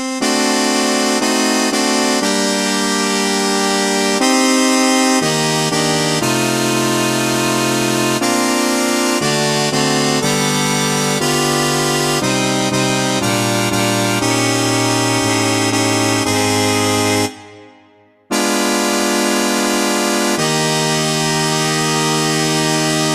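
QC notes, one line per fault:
No faults found on this pass; nothing to log.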